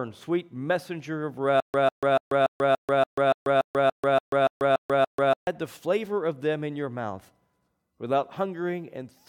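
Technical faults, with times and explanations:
1.60–5.47 s, stutter with silent gaps: just after "sweet messenger of", a 149 ms fragment of speech plays 13 times, each followed by 138 ms of dead digital silence, giving a steady 287 ms cycle until "the flavor of them" resumes. This is likely a stalled stream that replayed its last buffered piece at each retry and then ran dry. The silent gaps and the identical repeats set it apart from a plain dropout or a gapless loop.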